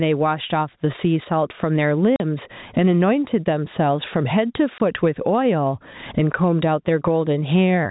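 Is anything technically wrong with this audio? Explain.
Yes, two kinds of fault are audible.

Gain pumping runs throughout: the gain swings by around 15 dB, pulling loud and soft parts closer in level so the sound is squashed, likely from excessive input gain driven into a fast limiter.

Packet loss filled with silence cuts hard-edged gaps at 2.16–2.20 s (40 ms) and 4.78–4.80 s (20 ms), consistent with dropped 20 ms packets replaced by silence.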